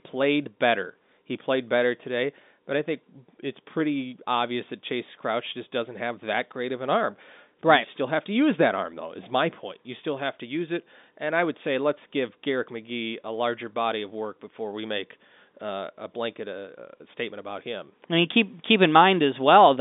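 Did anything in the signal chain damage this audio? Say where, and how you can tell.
No, nothing in the chain damaged this speech.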